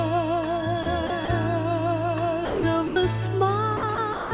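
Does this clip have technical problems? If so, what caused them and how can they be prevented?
Yes: brief gaps of steady noise replace the sound at 0.83–0.86, 1.07–1.10, 1.25–1.28, 2.45–2.63, 2.87–2.96, 3.77–3.83, 3.95–3.98 and 4.13–4.31 s, likely sound dropped by the voice detector and filled with comfort noise. On a spectrogram these show as flat, featureless noise patches; on the waveform the envelope collapses abruptly. Making the detector less aggressive or adding hangover time would prevent it.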